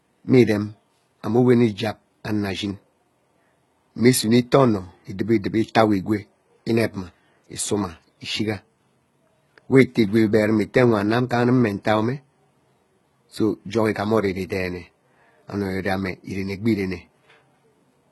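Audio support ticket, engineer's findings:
Likely HE-AAC compression at a very low bitrate, fitting roughly 16 kbps, throughout the speech. Treble rebuilt by spectral band replication, not coded, so harmonics misalign above the crossover. Heavy damage: s sounds gritty, metallic, lispy; nothing above 11.9 kHz.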